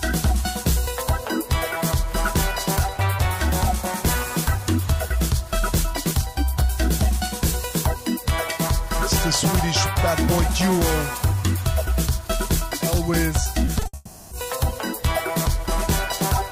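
Near the end of the audio, from 13.65 to 13.95 s, the sound turns choppy, the mark of repeated packet loss (robotic sound). Four separate gaps, the longest 60 ms, were patched by continuing the preceding sound, so about 120 ms of the 0.3 s stretch, some 40 percent, is concealment rather than real signal. On a spectrogram this shows as short blocks of smeared, repeated harmonics breaking up the normal texture. In the waveform, brief looped segments stand out against the surrounding audio. Straight after, from 13.95 to 14.33 s, the sound gives way to 360 ms of continued sound that never falls fully silent, most likely a long network dropout where nothing arrived and the receiver stretched the last sound to fill the hole. On a spectrogram this appears as flat horizontal streaks carrying the final spectrum forward. The waveform shows an unnaturally regular repeating pattern, and when real audio resumes at 14.33 s, that part of the original is simply gone.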